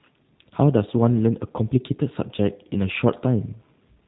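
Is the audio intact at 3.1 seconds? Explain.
No. The whole clip, including 3.1 s, has passed through a G.729 codec, which fits 8 kbit/s coding that rebuilds speech from a filter, pitch predictor and a few pulses, leaving it band-limited below 4 kHz, rough and synthetic.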